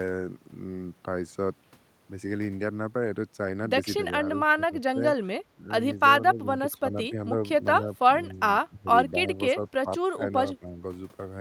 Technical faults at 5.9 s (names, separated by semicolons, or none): speech suppressed in double talk